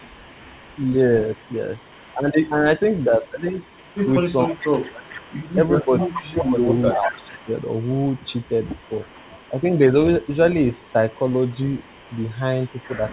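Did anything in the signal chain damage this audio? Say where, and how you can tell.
Yes. The damage is in call processing, at the far end's echo control. There's a delayed copy of the speech trailing the talker by 444 ms, most likely the far end's loudspeaker bleeding into its mic past an echo canceller that didn't fully converge. That's an echo leak. It sits about 30 dB down from 0 to 4.11 s, rises to about 15 dB down from 4.47 to 9.79 s, shows as a faint scrap around 10.2 s, and returns at about 30 dB down from 10.73 s to the end.

The same stage also causes speech suppressed in double talk. When both sides are talking, the canceller most likely can't tell the near talker from the echo, so it turns everything down. You hear the main voice sag from 4.45 to 5.28 s, dropping by as much as about 25 dB for roughly 0.7 s in total, and again from 5.82 to 7.49 s, dipping about 20 dB for roughly 1.5 s. 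The G.711 path cuts everything above 4 kHz, but that band limit is normal for the codec.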